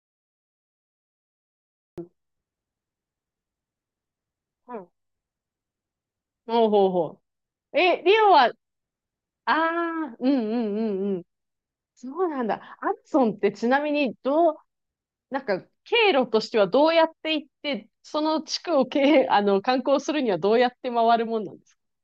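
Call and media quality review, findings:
Cut-off start, 0.00 to 1.98 s. Digital silence, then speech enters abruptly at 1.98 s mid-sound, no natural attack or fade-in. Probable component: capture or stream start logic, recording armed late. Mechanism: first samples written after speech already under way, so the onset is truncated rather than ramped. Check record-trigger timing and pre-roll buffering.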